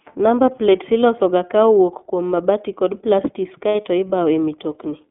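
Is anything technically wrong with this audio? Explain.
Yes. Throughout, the speech carries iLBC codec coloration: the band stops near 3.5 kHz and the tone is slightly rough and synthetic, which fits iLBC's 30 ms mode at about 13 kbps.

From 3.69 to 3.75 s, just after "kum mabati kod plastis", lost iLBC frames leave a gap of about 60 ms, consistent with two missing 30 ms frames. The decoder repeats the last pitch cycle with added noise, producing a brief buzzy held vowel before clean speech resumes.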